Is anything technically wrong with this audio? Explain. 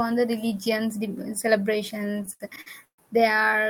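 Yes, there are two faults, both in the second half of the speech.

From 2.07 to 3.00 s there are repeated stalls (stutter). Audio kept arriving late or more slowly than it played, so the jitter buffer ran dry ten times. Each time the receiver held the last sound, fading it in the longer waits, until data resumed. About 328 ms is stretched filler, roughly a third of that span, and the longest hold is 135 ms. The speech drags and hiccups. Unlike dropouts, these stalls are filled with sustained, smeared sound rather than silence, and nothing is skipped.

Inside that stretch, from 2.52 to 2.58 s, a chunk plays out of order. A piece of about 21 ms arrived or was written late, so it lands two chunks after its proper place, behind audio that should follow it. There are three hard joins, and the moment sounds briefly jumbled. Unlike a dropout or skip, nothing is lost and nothing is held. The same material is present but rearranged, so the disruption is a garble rather than a gap.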